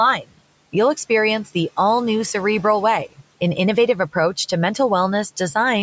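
From 0.20 to 0.39 s the noise suppressor cuts into the speech. It misjudges part of the speech as background and pulls the gain down with it, reaching about 18 dB of attenuation at the deepest point. Around 0.15 s of speech is affected, and it sounds swallowed and faint before the level recovers. The room noise sits about 21 dB below the speech.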